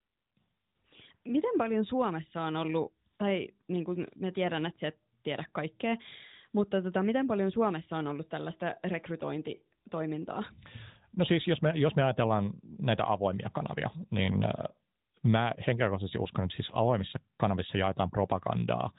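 No technical faults can be heard in this speech.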